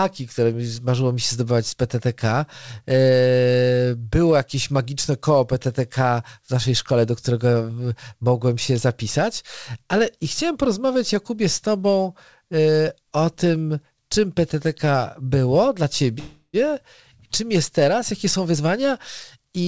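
Right after "było dla", from 16.19 to 16.65 s, there's a call audio freeze: the last sound stretches into a fading buzz with a brief silence, likely from late packets draining the jitter buffer. Then after "czym jest teraz", from 18.26 to 18.85 s, a jitter buffer speed-up rushes things to about 119% at unchanged pitch, trimming roughly a tenth of a second.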